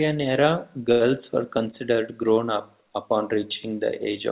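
At 0.92 s a packet arrived late and the receiver's jitter buffer ran dry, so there was nothing new to play until 1.03 s. The receiver covered the gap by stretching the last sound for about 84 ms, then resumed exactly where it had stopped, just before "were considered". It is a short stall from a late packet: nothing is lost, but a held sound with a slight buzz or dip delays everything after it by 84 ms, heard through the 4 kHz telephone band that points to G.711.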